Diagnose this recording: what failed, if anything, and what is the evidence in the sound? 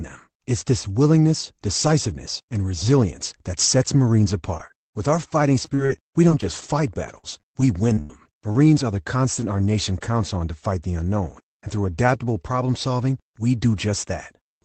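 Repeated packet loss (robotic sound) on the network at 4.57–5.17 s and 5.53–8.79 s, before "are the". Gaps of up to 85 ms are patched with repeated sound, which shows as smeared harmonic blocks.

A lost packet was rebuilt from error correction at 9.42–9.44 s, between "are the" and "our nation counts on". The Opus low-bitrate copy leaves a brief, noisier spectrogram patch.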